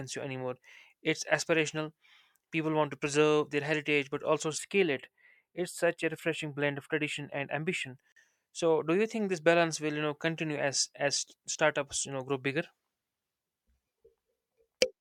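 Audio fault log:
4.58 to 7.96 s, channel delay (comb filtering): the speech turns thin and phasey, with the top end dulled rather than the whole sound muffled. One channel trails the other by a tiny fraction of a millisecond, which fits a delay of about four samples, and summing to mono cancels content near 7 kHz and above. Unlike a plain low-pass, the loss sits in fixed notches, so the upper sibilance sounds hollow rather than simply rolled off.
8.12 to 8.16 s, gap at a join of encoded pieces: a 44 ms silence cuts into continuous speech with smeared edges, and the sound resumes exactly where it stopped with nothing skipped. That clean resumption sets it apart from packet loss or a dropout, which lose material. The silence comes from encoder start-up delay and last-frame padding left untrimmed at a join, which fits pieces about 10 s long.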